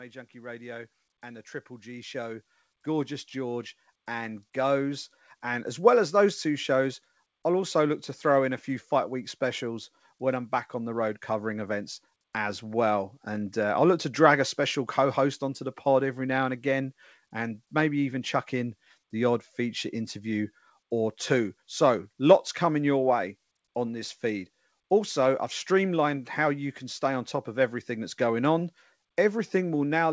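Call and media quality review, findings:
Speech and background swell together from 0.32 to 5.77 s, climbing about 16 dB before "well as those two". Automatic gain rising: AGC judged input too quiet, ramped gain gradually, lifting noise floor with it. Nothing above 8 kHz, fitting the G.722 call path.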